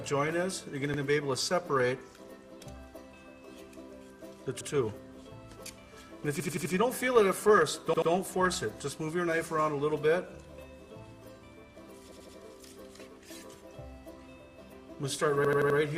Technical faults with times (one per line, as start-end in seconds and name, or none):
0.94-1.02 repeated buffer
4.61-4.69 repeated buffer
6.40-6.74 repeated buffer
7.94-8.11 repeated buffer
12.12-12.37 repeated buffer
15.45-15.79 repeated buffer